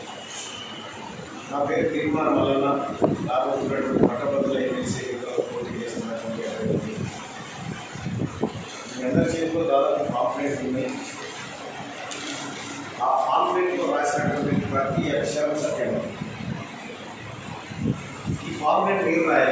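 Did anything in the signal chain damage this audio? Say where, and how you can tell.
No, nothing audible points to damage at any stage of the signal chain.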